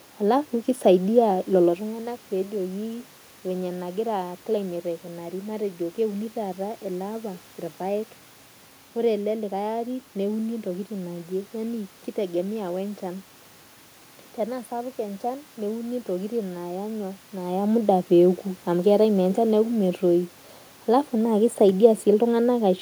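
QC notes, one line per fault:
No system faults can be heard in the signal; the room background and the level shifts shortly after the start and again late in the clip, where the talker moves relative to the microphone, belong to the recording itself.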